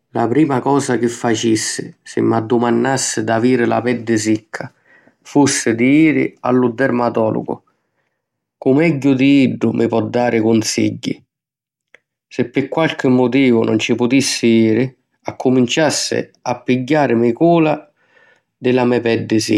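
No technical faults can be heard anywhere in the speech recording. Nothing in the signal chain stands out as having gone wrong at any point.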